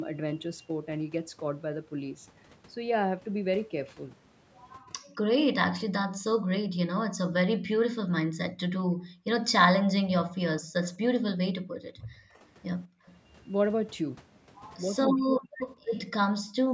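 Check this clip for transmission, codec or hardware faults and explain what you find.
The clip has three kinds of fault, all from echo control on a call.

Speech suppressed in double talk occurs from 4.9 to 6.29 s, 11.1 to 12.39 s and 15.15 to 15.6 s. The talker's voice dips and breaks into pieces. The first and last episodes cut it down by roughly 40 dB. The middle one is milder, about 20 dB. The likely cause is the echo canceller treating overlapping far-end audio as echo and turning everything down together.

Background gated by the echo canceller appears from 5.39 to 9.25 s, 11.69 to 13.05 s and 16.45 s to the end. The room sound drops by about 40 dB in brief holes and then returns. While the loudspeaker played, the canceller clamped the microphone hard. It let go once the loudspeaker fell quiet. The gaps are short, about 1.3 seconds in total.

Echo leak is heard from 10.83 to 13.13 s and from 15.41 to 15.95 s. 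A delayed copy of the voice trails the original by 263 ms. In the first stretch it is faint, around 25 dB down. In the second it is much stronger, only about 10 dB below the speech. This likely comes from a loudspeaker on one side whose canceller left part of the pickup unremoved.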